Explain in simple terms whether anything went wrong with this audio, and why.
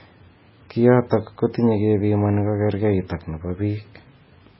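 Something did go wrong, and it lasts the whole clip. The speech sounds dull and watery, as if heard through a thin wall of water. Nothing above about 5.6 kHz is left, so the crisp top of the sound is gone. S sounds turn swirly and metallic. The likely cause is heavy MP3 compression. The encoder ran short of data, cut off the treble, and let quiet details flicker in and out.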